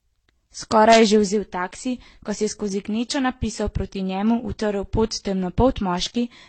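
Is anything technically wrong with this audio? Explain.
Yes. Transcoding between lossy codecs runs throughout: nothing is heard above 8.7 kHz, and mismatched artefacts overlap, likely from successive re-encoding that preserved each earlier codec's damage.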